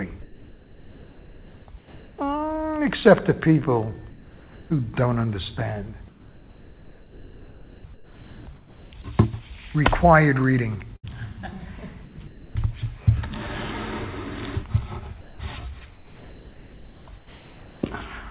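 From 0.22 to 2.18 s, 4.1 to 4.7 s and 6.08 to 8.92 s, the background turns into flat, featureless hiss. This is comfort noise in place of the background, likely from discontinuous transmission. At 4.1 s it drops about 1 dB.

At 10.96 s comes a burst of packet loss. The last sound is held and faded for about 70 ms. Then about 80 ms of audio is skipped.

Comfort noise returns from 12.05 to 12.55 s, 15.21 to 15.39 s (about 5 dB quieter), and 15.93 to 17.83 s. Throughout, nothing is heard above 4 kHz, as fits a narrowband G.711 call.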